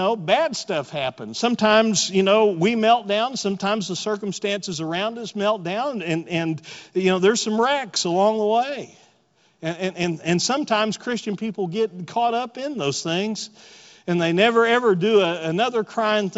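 No technical faults can be heard in this speech recording. The G.722 wideband telephone coding carries the speech up to about 7 kHz, with at most a faint hiss in the upper band, which fits its full 64 kbit/s mode.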